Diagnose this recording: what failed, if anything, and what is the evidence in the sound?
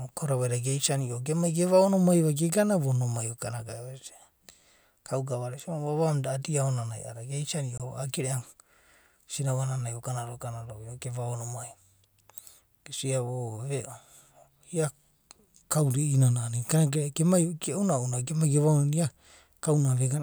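A block of digital silence from 7.78 to 7.80 s in the speech points to a driver or buffer underrun. The edges are abrupt and unfaded, unlike a concealed network loss, and the 21 ms hole fits a 1024-sample buffer.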